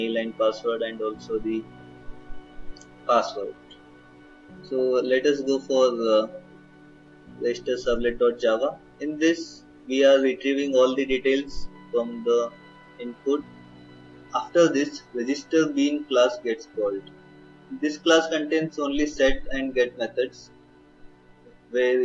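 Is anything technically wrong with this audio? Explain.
No, nothing in this audio stood out as technically wrong on listening.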